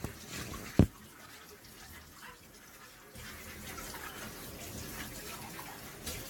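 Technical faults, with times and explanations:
Throughout: generation loss. The audio has a swirly, hollow, smeared quality beyond what a single encode at this quality would cause, and transients lose their edge. The likely cause is repeated lossy re-encoding, around seven passes, with the character pointing to AAC-LC near 96 kbit/s. Each pass quantises on a shifted frame grid, so noise and gaps accumulate. A spectrogram shows a hard ceiling at 17 kHz, patchy holes and flickering blocks in the upper bands, and blurred onsets on the waveform.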